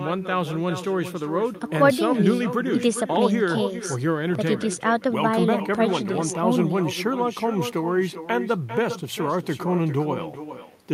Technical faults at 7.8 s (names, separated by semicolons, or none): echo with no canceller